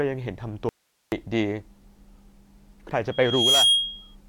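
An audio dropout to a faint residue runs from 0.69 to 1.12 s: the speech vanishes abruptly for about 430 ms, leaving only hiss roughly 45 dB below the signal, most likely because the signal feed broke while the downstream path stayed live.

A loudspeaker feedback squeal appears from 3.11 to 4.15 s: a 3.3 kHz tone swells over roughly 0.4 s into a steady squeal about 5 dB above the speech, as the microphone re-amplifies its own loudspeaker output at that frequency.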